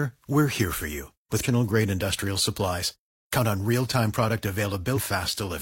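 Damaged data in a compressed stream appears at 1.40 to 1.45 s, between "we're here for you" and "grade industrial supplies", and again at 4.93 to 4.98 s. In both spots, corrupted bytes in the encoded speech left the decoder unable to read the affected frames. It lost sync and had to hunt for the next valid frame header. Each event is a short blip lasting about 50 to 60 ms.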